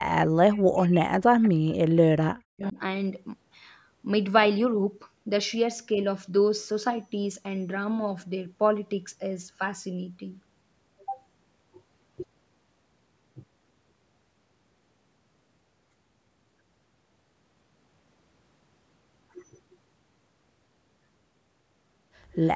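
From 0.42 to 2.77 s the speech is repeatedly pushed down, about 2 seconds in total, dropping by around 40 dB at its deepest. This is speech suppressed in double talk. The likely cause is both sides talking at once. The echo canceller could not tell the local talker from loudspeaker echo, so it turned everything down. The speech dips and breaks into pieces across this stretch.

Inside that stretch there are two brief echo leaks. The first runs from 1.42 to 1.46 s and the second from 2.62 to 2.71 s. Each is a faint, delayed copy of the speech, arriving 230 and 232 ms late and sitting roughly 25 dB below it. A third, quieter scrap comes at 22.41 to 22.48 s, delayed 264 ms and about 35 dB down. In each case the far end likely played the call on a loudspeaker, and its echo canceller let some of it back through.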